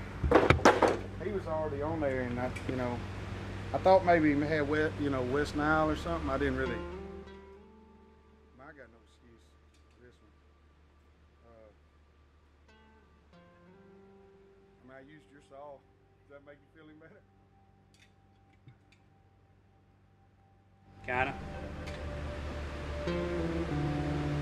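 Zipper noise appears from 20.8 to 21.21 s. A level move of roughly 25 dB is applied in 1 dB steps, about fifty per second, with no smoothing between them. Each jump adds a tiny click, so a ticking buzz rides on the sound during the change.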